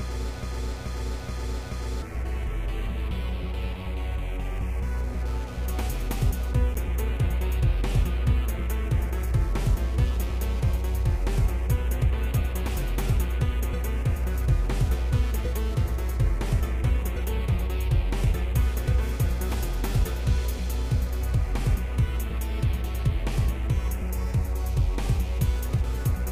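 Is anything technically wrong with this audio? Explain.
Yes. From 0.43 to 2.02 s there is a broken-record loop. The player or stream likely stalled and kept resending the last fragment it held. A 429 ms piece repeats four times back to back, identical each pass, and the audio meant for that stretch is gone.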